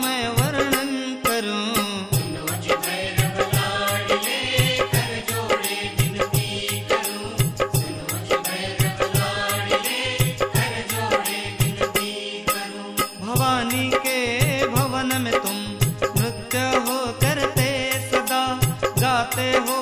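No technical faults can be heard anywhere in this clip.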